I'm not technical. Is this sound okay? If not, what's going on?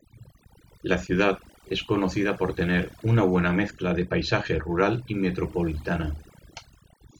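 No. The whole recording shows overdone noise removal: a cleanup tool meant to take out background noise was set far too strong. Between phrases the background drops to an unnatural near silence sprinkled with twinkling specks, and the quieter parts of the voice were stripped away along with the noise. What sets this apart from plain background hiss is that the room sounds emptied out rather than noisy.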